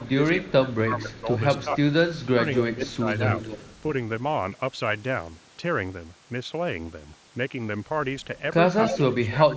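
From 0.00 to 1.82 s the speech dips by up to around 15 dB in pieces, and it dips again by around 10 dB at 2.35 to 3.06 s and 8.87 to 9.56 s. This is speech suppressed in double talk, likely an echo canceller that could not separate the near talker from loudspeaker echo and attenuated both. An echo leak gives a faint delayed copy about 0.25 s behind the speech at 0.73 to 1.64 s, well below it. The copy is clearer at 2.18 to 3.81 s and briefly at 8.87 to 8.97 s, where it is only about 10 dB down. Likely cause: a loudspeaker-side canceller that left residual echo to be sent back. Speech reaches about 8 kHz, consistent with the mSBC headset path.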